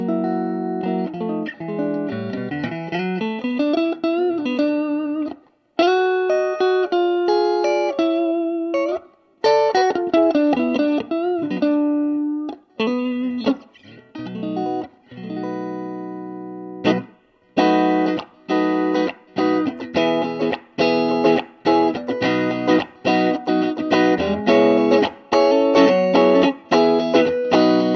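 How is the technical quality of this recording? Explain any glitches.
Nothing stood out as a technical problem on listening, so there are no glitches to explain.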